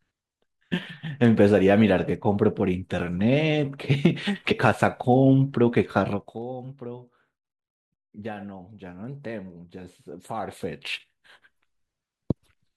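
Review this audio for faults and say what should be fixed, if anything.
Compressed frames skipped at 4.50 to 4.54 s: the speech jumps ahead by roughly 70 ms. Prevent it with error-checked transfer and storage of the encoded file.

Zipper noise from 6.08 to 6.42 s: a drop of roughly 15 dB is applied in 2 dB steps at about 20 per second, each step clicking audibly. Prevent it by smoothing gain per sample.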